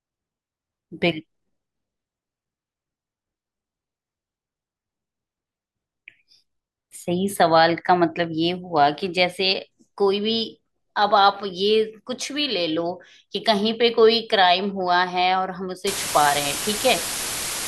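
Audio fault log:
15.87–17.68 s, low bit depth with dither: a loud, steady hiss appears under the speech and runs to the end of the clip. The sound is reduced to only 4 bits here, with dither added before rounding. The dither turns the coarse rounding error into even white noise instead of distortion. At 4 bits that noise is large, sitting only a few decibels below the speech, so the hiss nearly matches it in level.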